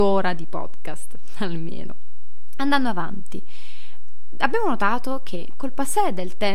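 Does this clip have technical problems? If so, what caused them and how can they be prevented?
Yes, there's a DC offset running through the whole speech clip: the waveform sits shifted off zero by a constant of about -14 dBFS. You won't hear it as such, but it eats headroom and shows up as steady energy right at 0 Hz. A high-pass or DC-blocking filter at capture, plus checking the interface's input stage, prevents it.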